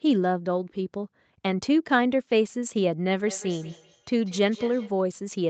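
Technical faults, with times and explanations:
3.26 to 5.03 s, feedback echo between two devices: a nearby device replays this microphone back into it, so speech returns about every fifth of a second, thin and ringing, about 18 dB down.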